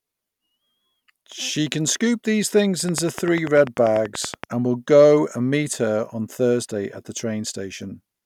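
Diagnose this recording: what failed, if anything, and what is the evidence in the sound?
A regular train of clicks ticks over the speech from 2.89 to 4.45 s, 10.3 per second and loud, likely interference pickup in the analogue wiring.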